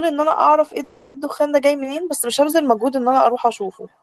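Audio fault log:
0.83–1.20 s call audio freeze: the last sound stretches into a fading buzz for about 310 ms, then speech resumes exactly where it stopped, likely because delayed packets emptied the jitter buffer. Unlike a dropout, nothing is lost; everything after arrives about 0.3 s later.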